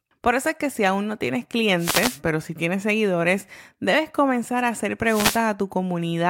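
Twice in this speech there's a wireless microphone noise hit, from 1.77 to 2.20 s and again from 5.04 to 5.46 s. Each time the FM radio link fades as reflections cancel, receiver noise swells over the voice, and you get a short swish of static lasting just over four tenths of a second.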